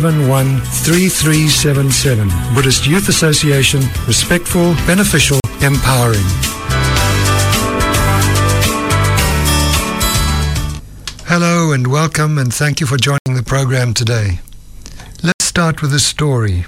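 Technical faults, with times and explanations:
5.4 s (40 ms), 13.18 to 13.26 s (80 ms), 15.32 to 15.4 s (80 ms): block of digital silence. At each of these points a run of samples drops to silence and then returns, with no fade on either side. The 40 ms gap comes across as a quick pop with a tiny hole, and the two 80 ms gaps as audible dropouts. The output buffer was probably left unfilled in time.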